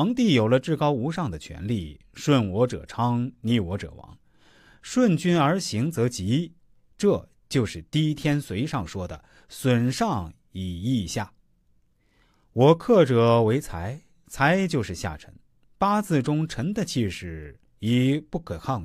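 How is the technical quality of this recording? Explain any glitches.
The technical quality of this speech recording is sound, with no glitches to explain.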